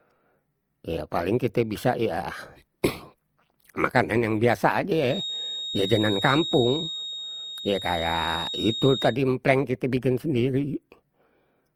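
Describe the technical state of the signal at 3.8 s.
At 3.8 s, as across the whole speech clip, the signal shows transcoding between lossy codecs, likely an MP3 stage near 96 kbit/s followed by Opus near 32 kbit/s. The second encoder spends bits re-coding the first one's artefacts and adds its own, so the artefacts of both codecs sit together, with nothing above 20.2 kHz.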